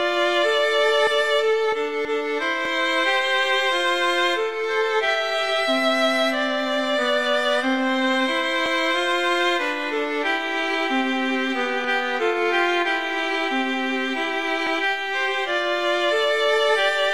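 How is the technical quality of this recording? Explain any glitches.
The recording has one recurring glitch. Overlapping chunks occur at 2.65, 8.66 and 14.67 s, every 6 s. Each chunk restarts about 7 ms early, replaying that sliver and causing a brief click.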